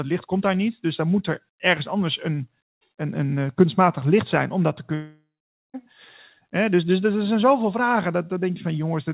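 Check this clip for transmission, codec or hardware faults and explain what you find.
One fault stands out, a long network dropout, likely the cause of a gap from 4.94 to 5.76 s, just after "zijn om dat te". For about 0.8 s no packets reached the receiver, so its concealment stretched the last received sound into a fading buzz, then gave way to roughly half a second of near-silence. The speech resumes after the gap with that stretch simply missing. Throughout, the narrowband call codec leaves nothing above 4 kHz.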